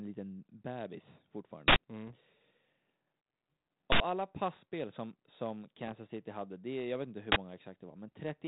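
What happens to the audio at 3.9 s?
At 3.92 s an uninitialised buffer plays out: an 80 ms block, ending at 4.0 s, was sent before any audio was written into it, so stale memory became samples. It sounds like a sudden, loud burst of digital noise, seen as a dense rectangular slab on the waveform and a broadband vertical band on the spectrogram.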